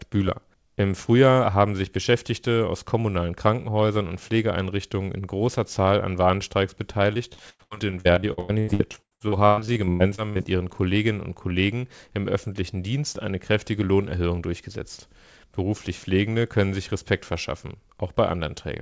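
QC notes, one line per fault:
7.14–10.47 s, repeated packet loss (robotic sound): close to thirty dropouts over about 3.3 s, the longest 114 ms, with about 1.3 s patched by extending the preceding sound. Nearly 40% of the stretch is concealment, so the speech turns choppy. A spectrogram shows smeared, repeated harmonic bands and abrupt edges at each patch. The waveform shows looped, envelope-flattened segments. The content stops at 8 kHz, which fits a G.722 call path.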